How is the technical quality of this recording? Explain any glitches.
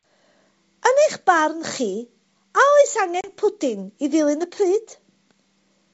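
There's one real glitch, a dropout from about 3.21 to 3.30 s. The call runs over G.722 wideband at 64 kbit/s, which sounds like clear speech up to about 7 kHz with a light hiss in the top band.

At 3.21 s you get packet loss on an ADPCM call. About 30 ms of audio, probably a few packets, goes missing and is filled with silence, so there's a hard-edged hole. ADPCM decoders track the signal with an adaptive predictor and step size, and those fall out of step with the sender's during the gap. When the speech comes back it has a bit of distortion, then settles by about 3.30 s.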